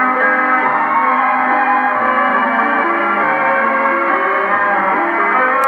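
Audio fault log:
throughout: low bit depth with dither. A constant, even hiss sits under the whole clip, roughly 50 dB below the signal. The hiss fits a word length of about 10 bits. Dither noise was added before each sample was rounded to so few levels. That turns the rounding error into steady, random white noise instead of harsh, signal-following distortion. So the sound stays clean in shape, with a fixed hiss behind it that never pumps or changes.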